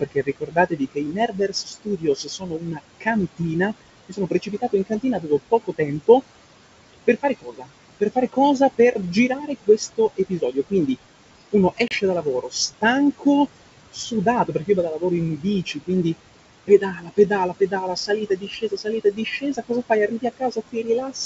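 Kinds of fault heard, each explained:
Noise suppressor artifacts: the background dips between phrases and swells under them, from roughly 20 dB of frame-by-frame noise reduction throughout.
Speech cut by the noise suppressor: soft consonants and endings sound swallowed across much of the clip, pulled down by about 20 dB, because the suppressor mistook them for noise.
Packet loss on an ADPCM call: a hard-edged gap of about 30 ms near 11.9 s, then brief distortion while the decoder's predictor recovers.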